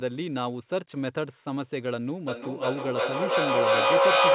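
From 2.28 s to the end, a feedback howl grows to about 10 dB above the speech, settling near 500 Hz and pulsing roughly every 400 ms. Unlike echo, the repeats build instead of fading.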